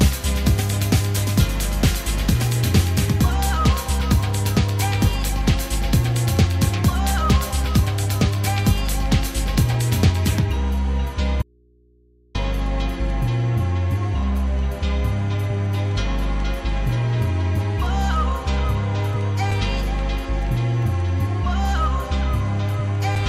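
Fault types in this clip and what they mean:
Audio dropout to a faint residue: the signal feed was likely interrupted while the input stayed live, so the sound cuts out abruptly for 0.92 s, leaving only low mains hum far below normal level.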